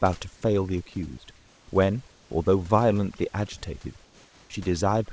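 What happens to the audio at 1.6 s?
Comfort noise in place of the background covers 1.36 to 1.68 s, a 320 ms gap in the speech. The sender's voice detector likely judged this stretch silent and stopped sending real audio, so the receiver filled it with synthetic noise shaped only roughly like the room. The genuine background, which sits about 34 dB below the loud parts, gives way to a smooth, featureless hiss about 2 dB quieter, and the real texture returns once the speech resumes.

Overdone noise removal also runs through this moment, as it does across the whole clip. The suppressor pulls individual frequency bands sharply down whenever they come close to its noise estimate, and the quieter parts of the speech are lost along with the room noise. Outside the filled stretch this leaves a lowered background dotted with twinkling specks.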